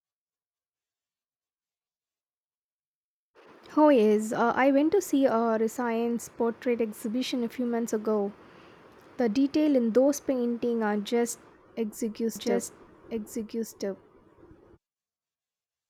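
From 12.36 s to the end, a second copy of the speech runs underneath the original, trailing by about a second and a half and sitting about 5 dB lower. It cuts in abruptly, with no fade, and is as clear and dry as the main track, with no reverb. This doubled audio track is likely caused by the same signal being captured again through a slower path, or by an edit that left two offset copies mixed together.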